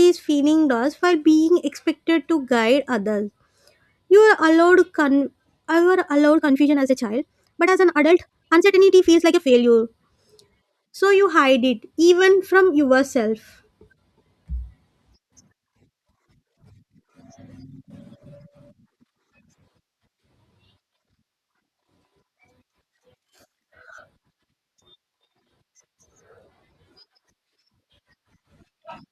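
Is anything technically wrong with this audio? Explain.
Yes. From 6.29 to 9.67 s the speech suddenly turns rushed at unchanged pitch, a time-stretched section, likely squeezed to about 1.69x by dropping short pieces.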